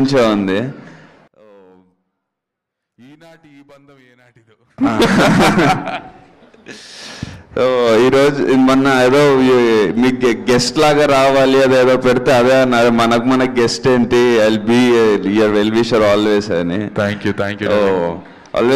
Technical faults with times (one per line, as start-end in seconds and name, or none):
1.28-4.78 one channel inverted